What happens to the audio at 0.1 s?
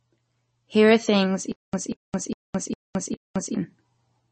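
At 0.1 s, likely MP3 compression, present throughout, with nothing above 8.3 kHz and plainly audible codec damage from weak frequency lines dropped, which fits a bitrate around 32 kbps.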